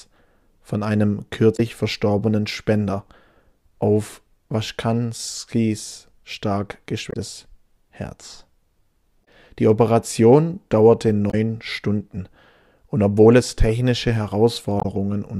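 A speech recording broken by five short glitches: at 1.53 s (just after "von einem"), 7.09 s, 9.21 s, 11.27 s and 14.77 s, each lasting roughly 70 to 80 ms. These are damaged data in a compressed stream. Corrupted bytes make the decoder misread or discard frames, lose sync and hunt for the next valid frame header, so a brief disturbance replaces a short stretch of audio.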